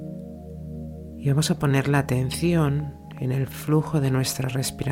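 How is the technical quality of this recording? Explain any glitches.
The quality is spoiled by one glitch. From 1.82 s to 4.88 s there is a train of clicks: likely interference or a faulty connection injects about fifteen pulses, irregularly spaced near 4.6 per second, heard as ticking roughly as loud as the sound.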